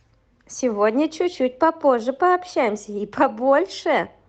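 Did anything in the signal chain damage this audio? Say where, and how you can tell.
No damage anywhere in chain.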